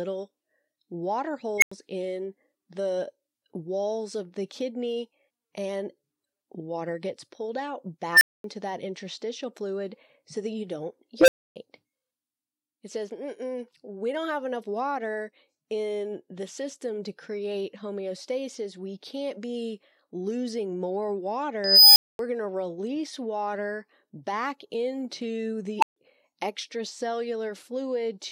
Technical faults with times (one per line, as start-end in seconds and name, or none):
1.58-1.72 unstable filter
8.13-8.44 unstable filter
11.19-11.56 unstable filter
21.64-22.19 unstable filter
25.79-25.96 unstable filter